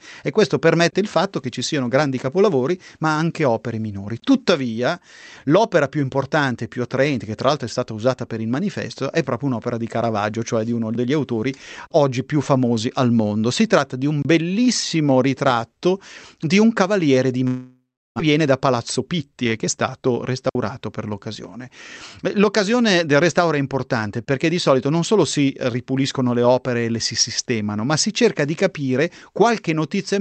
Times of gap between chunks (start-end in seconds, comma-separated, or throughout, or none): 4.20-4.22, 14.22-14.25, 24.25-24.27